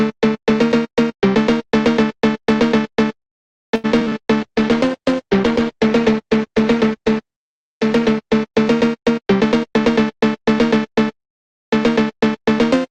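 From 3.75 to 4.13 s the audio turns choppy, with pieces missing. This is repeated packet loss. Five short holes, the longest 85 ms, are patched by stretching the preceding sound. Over a third of that stretch is filled in this way. Next comes a call bitrate drop from 4.42 to 9.15 s. The sound grows rough, watery and dull, with the highs cut away. That fits the encoder falling from about 48 kbps to about 14 kbps, staying at the low rate for roughly 3.4 s. From 9.10 to 9.90 s a jitter buffer speed-up follows. The receiver trims tiny pitch-period slices to shed built-up delay. The audio runs about 11% fast at unchanged pitch and sounds hurried. About a tenth of a second goes missing.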